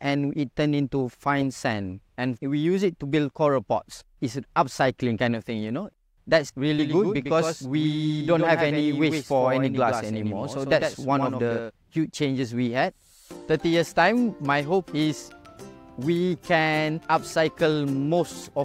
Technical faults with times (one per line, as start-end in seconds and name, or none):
6.79-11.71 doubled audio track